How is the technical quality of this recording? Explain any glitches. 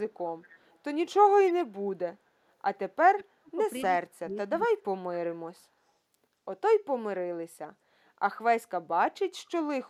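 The recording has two kinds of glitch, both typical of a speakerphone-style call path.

Between 0.41 and 0.78 s, and again from 1.46 to 1.53 s, a faint delayed copy of the speech trails it by 226 ms, quiet at first and about 10 dB louder the second time. This is echo leak, likely from a loudspeaker echo canceller that let some of its microphone pickup return.

From 3.1 to 3.58 s and from 3.84 to 5.06 s, the speech sinks sharply, dropping by around 35 to 40 dB in places, so it nearly vanishes in patches. This is speech suppressed in double talk, likely the echo canceller mistaking overlapping talk for echo and ducking everything.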